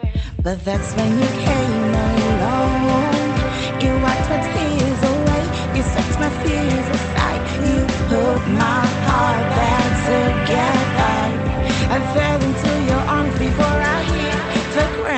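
No technical faults can be heard in this audio.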